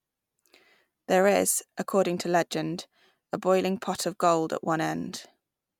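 Nothing in this recording stands out as a technical fault at any point, so there's no trouble to walk through here.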